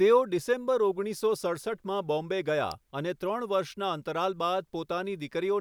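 Speech clip with an electrical switching spike at 2.72 s: a sharp snap laid over the sound, likely from a nearby switch arcing. It appears as a narrow waveform spike and a thin broadband vertical line on the spectrogram.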